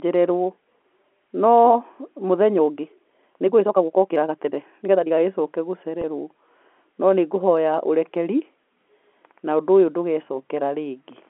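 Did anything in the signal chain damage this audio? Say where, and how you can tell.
Yes. From 2.54 to 5.14 s the pace jumps to about 1.54 times normal while pitch holds, so it sounds rushed. The stage is likely time-stretching software that kept pitch by dropping short pieces. A spectrogram shows unchanged harmonic spacing with compressed syllables and small splice discontinuities.

At the network stage, a time-stretched section is followed by packet loss with pitch repetition at 6.02 to 6.04 s. The gap fits a single lost 20 ms packet bridged by repeating the last pitch period, which sounds like a brief, slightly held, buzzy note. The waveform shows identical repeated cycles, and the spectrogram shows a short frozen harmonic pattern.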